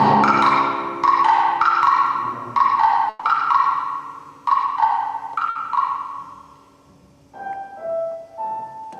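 A burst of packet loss at 3.09 s and 5.49 s leaves 140 ms and 60 ms of concealment, which stretches and fades the last sound before playback skips ahead past about 120 ms and 60 ms of missing audio.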